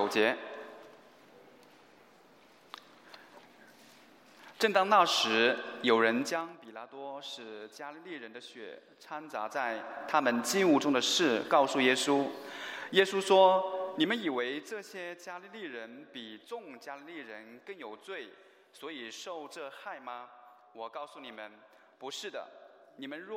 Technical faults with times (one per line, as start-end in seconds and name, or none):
6.18-6.59 zipper noise
13.89-14.77 zipper noise